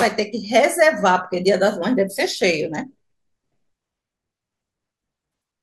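Nothing in this stretch of speech calls for comment, since no technical fault turns up anywhere in the recording.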